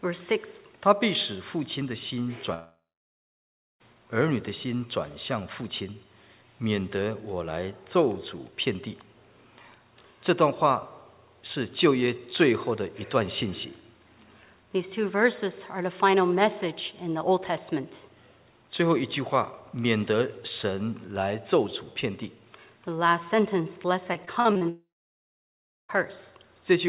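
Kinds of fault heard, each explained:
Long network dropout: At 2.54 to 3.82 s and again at 24.69 to 25.91 s, roughly 1.2 s of sound just goes missing, likely a stall in the network feed. The last sound gets stretched into a brief fading buzz, then about a second of silence, and the audio resumes further along.
Repeated packet loss (robotic sound): From 24.14 to 24.63 s there are five short holes, the longest 39 ms. Each one is patched by stretching the preceding sound, so about a quarter of that half-second is filler, giving a choppy stutter with pieces missing right before the second dropout.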